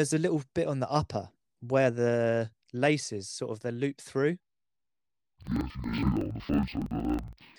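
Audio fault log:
4.40–7.58 s: interleaved audio read as planar. Each block of about 46 ms, which fits a 2048-sample buffer, splits alternating left-right samples into halves that play together at half speed, so the speech drops an octave, sounds doubled and chops at 21.5 Hz.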